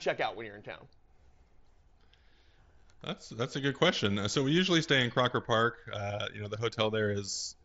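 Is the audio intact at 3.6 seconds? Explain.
Yes, the speech at 3.6 seconds is intact, carried through the Bluetooth mSBC headset codec, whose wideband path passes nothing above about 7.7 kHz.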